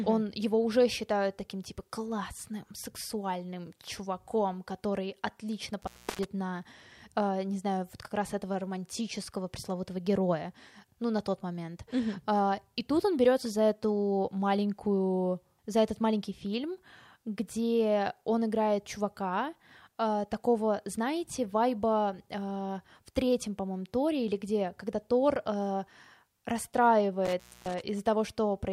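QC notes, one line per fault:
5.82–6.24 s, intermittent contact: a loose cable or plug briefly loses connection, so the speech drops out for about 0.32 s. The contact scraping open and closed puts crackle at both edges, and faint hiss remains in the gap.
27.25–27.82 s, intermittent contact: a loose connection opens again, cutting the speech for about 0.25 s. Crackle marks the break and reconnection as the contact scrapes, with faint hiss in place of the signal while the line is open.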